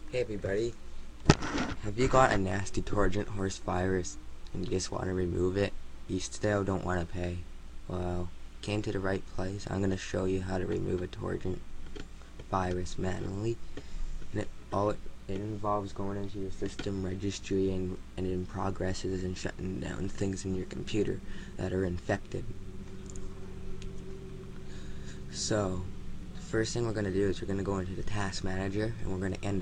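Timecode bleed runs throughout. A 30-frame linear timecode leaks in, warbling between roughly 1 kHz and 2 kHz, well below the main sound.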